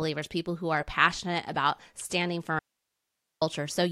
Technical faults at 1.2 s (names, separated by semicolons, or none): none